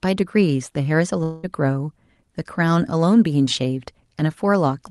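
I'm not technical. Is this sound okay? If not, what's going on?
No. Long network dropout, 1.23 to 1.45 s: about 0.2 s of sound likely never arrived, and the receiver filled the gap with a fading buzz.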